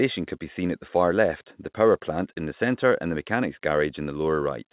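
Speech with no faults found; the call path carries it normally, with nothing above 4 kHz, which fits a narrowband telephone codec such as G.711 mu-law.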